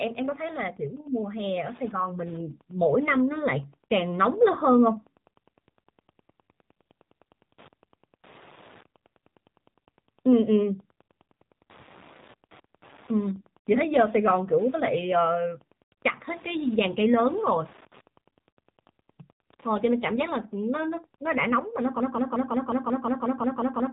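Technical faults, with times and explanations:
Throughout: Wi-Fi interference. A faint tick repeats about every 102.4 ms, roughly ten times a second, sitting around 30 dB below the speech. A nearby Wi-Fi radio's beacon bursts are being picked up and rectified by the audio circuit, turning radio pulses into audible clicks.
Throughout: AMR narrowband mobile codec. The speech sounds plainly buzzy and synthetic, and nothing above 3.8 kHz survives, which fits a low AMR-NB mode near 7.4 kbps. The codec rebuilds the voice from a vocal-tract model excited by sparse pulses, so natural texture and all high-frequency content are lost.
22.00 to 23.92 s: broken-record loop. A 0.18 s fragment repeats exactly, back to back, about eleven times until the clip ends, and the audio that should have played there is missing. The likely cause is a player, encoder or stream stalling and resending its last buffered piece.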